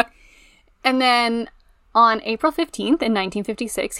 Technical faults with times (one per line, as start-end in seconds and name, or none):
none